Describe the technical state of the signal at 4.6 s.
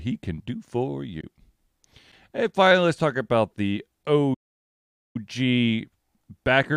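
At 4.6 s the output is in a playback stall, silent from 4.34 to 5.16 s right after "let's talk about the", likely from the player running dry of data. The waveform is a flat line and the spectrogram a blank column.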